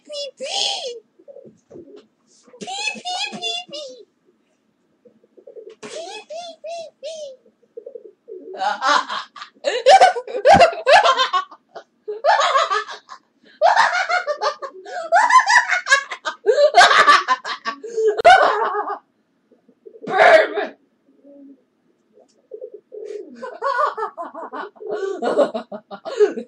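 At 18.21 s a gap at a join of encoded pieces cuts into the sound: a silence of about 41 ms where two separately encoded segments were butted together with their encoder delay and end padding left in. It sounds like a brief dropout, after which the sound resumes exactly where it stopped. On a waveform it shows as a flat line with smeared edges. A spectrogram shows a narrow vertical blank stripe across all frequencies, its borders slightly smeared by the codec.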